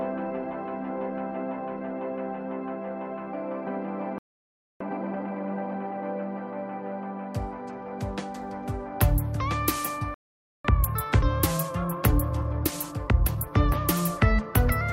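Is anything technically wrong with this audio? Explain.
Yes. There are two playback stalls, at 4.18 to 4.80 s and 10.14 to 10.65 s. The player likely ran short of data or had its output thread held up, so the sound cuts off mid-flow and stays silent for about 0.62 s and then about 0.50 s.

Each stall is followed by time-compressed catch-up, at 4.80 to 6.04 s and 10.65 to 13.65 s. The player clears its backlog by dropping small slices and cross-fading the joins. The audio sounds hurried but keeps its pitch, running 1.5 times fast after the first stall and 1.1 times after the second.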